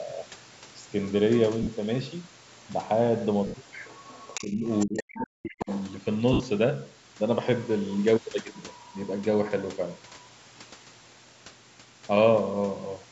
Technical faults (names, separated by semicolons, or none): lost LE Audio frames; other side's voice leaking through; speech suppressed in double talk